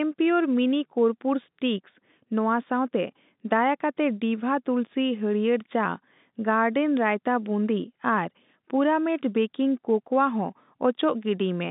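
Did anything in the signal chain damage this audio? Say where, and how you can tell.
No, no stage in the chain has damaged this speech. What you hear is ordinary G.711 telephone coding working as intended: the sound sits in a line band of roughly 150 Hz to 3.7 kHz with nothing above 3.8 kHz, and any coding noise is faint at most, which fits a 64 kbps mu-law link.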